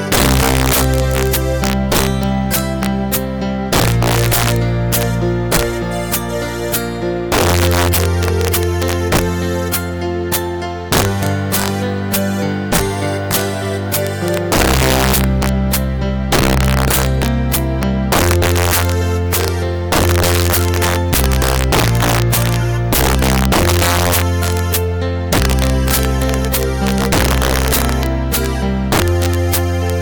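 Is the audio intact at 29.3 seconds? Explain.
No. At 29.3 s, as throughout the clip, there is integer overflow. The signal is driven roughly 12 dB too hot, and around 3 percent of samples exceed the integer ceiling and wrap to the opposite extreme instead of being limited, producing harsh, violent cracks on loud peaks.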